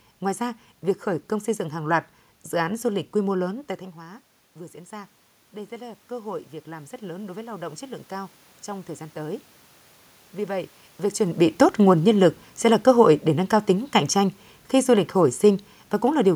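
Automatic gain rising, from 3.95 s to 9.53 s: just before this, around 3.5 s, the talker moves back and the level at the microphone falls by about 15 dB. The gain control reads that drop as too quiet an input and slowly raises its gain, by about 9 dB over nearly six seconds. You hear the voice creep back up, with the room noise behind it swelling by the same amount, so the background grows along with the speech.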